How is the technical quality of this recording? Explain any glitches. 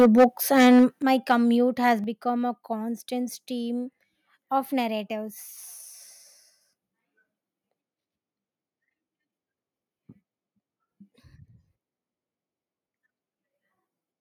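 The opening two seconds have audible problems: repeated distortion and two sudden level drops.

Microphone overload shows up from 0.0 to 0.25 s, 0.55 to 0.85 s and 1.30 to 1.32 s. The peaks sit about 8 dB, about 6 dB and about 1 dB over full scale. The likely cause is input gain set too high, so the converter flattens the waveform tops. About a fifth of samples are cut in the first burst, fewer later. The result is a harsh, crackly edge on the loudest moments.

A microphone volume step-down occurs at 1.02 s and again at 2.04 s, just before "a constant stream of". The level falls abruptly, by about 9 dB and then about 5 dB. Background noise drops along with the voice. This is likely the call software's automatic gain control reacting to the clipped peaks. It lowers the input volume in one jump rather than gradually. That is why each drop follows distortion.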